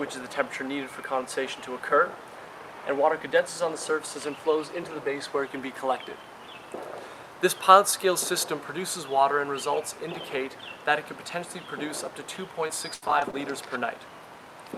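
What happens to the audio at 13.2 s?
At 13.2 s the audio is in the middle of a burst of repeated packet loss (robotic sound) running from 12.67 to 13.34 s. Five short dropouts, the longest about 80 ms, are patched by stretching the preceding sound, so about a fifth of that span is synthetic fill. It sounds choppy, with pieces missing. On a spectrogram, smeared repeated frames alternate with blank notches; the waveform shows copied cycles and abrupt breaks.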